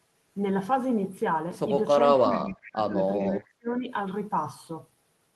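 From 2.02 to 2.95 s the talker's level drops away in patches, down by something like 30 dB at its deepest, for roughly 0.7 s in total. That's likely speech suppressed in double talk: the echo canceller couldn't separate the near talker from the far side and ducked both. Inside that stretch, 2.31 to 2.7 s, there's a faint delayed copy of the voice trailing 415 ms behind, about 25 dB down, likely an echo leak where the canceller let some loudspeaker pickup slip back. It returns from 3.19 to 3.43 s, same 415 ms delay, quieter at about 30 dB down. Overlapping that, 3.25 to 3.88 s, the voice gets pulled down again by around 30 dB in pieces for about half a second, the same double-talk suppression.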